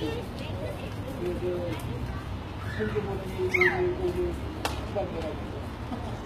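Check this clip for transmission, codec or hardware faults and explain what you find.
There is one fault, and it runs through the whole clip. It sounds like HE-AAC compression. At the very top, nothing comes through above about 14.9 kHz. Below that cutoff, the treble is present but not natural. Hiss-like and sharp sounds come out gritty and metallic. The damage is plainly audible. This is likely spectral band replication. The codec keeps only the lower spectrum and rebuilds the highs by copying lower bands upward under a rough envelope. That misaligns detail across the crossover. The damage fits a low bitrate of around 20 kbps.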